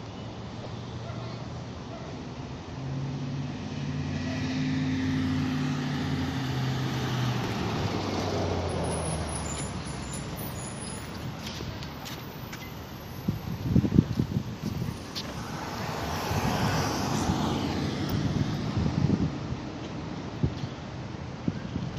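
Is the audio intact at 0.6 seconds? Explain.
No. At 0.6 seconds the sound falls inside a burst of DAB burbling that runs from 0.55 to 0.66 s. Bit errors slipped past the error correction into the MP2 data, corrupting samples, so short blips of noise land in single sub-bands. The span covers about a tenth of a second, or 11 MP2 frames, and the damage points to a bit error rate of roughly a fifth of a percent. It is heard as a brief burst of burbling over the programme.

Underneath that burst, and across the whole clip, MP2 compression is plainly audible. The sound is dulled and carries a gurgling, granular edge. Upper sub-bands drop in and out, and the bands that remain are coarsely quantised, which fits a Layer II encode at around 80 kbps. That encode is the likely cause of the constant dullness, and the burbling at 0.6 s sits on top of it.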